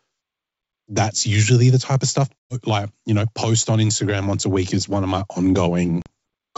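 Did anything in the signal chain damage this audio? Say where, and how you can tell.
Yes, there's packet loss on an ADPCM call at the network stage. The G.722 wideband coding itself sounds clean. A hard gap opens from 2.39 to 2.55 s, between "the type of stuff" and "like you know post", with about 120 ms gone, likely several packets. A shorter 40 ms hole follows at 6.02 to 6.08 s. After each hole the decoder's predictor and step size have drifted from the sender's, so the audio returns slightly distorted, then settles within a few tens of milliseconds.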